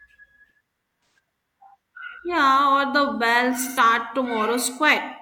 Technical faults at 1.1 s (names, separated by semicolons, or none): AAC frame loss with concealment